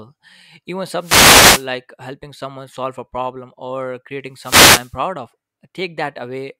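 Two wireless microphone noise hits occur, from 0.98 to 1.68 s before "helping someone solve a" and from 4.33 to 4.98 s after "solve a problem or". The analogue radio signal fades, so receiver hiss swells into a static swish, unlike a digital link's abrupt silent dropout.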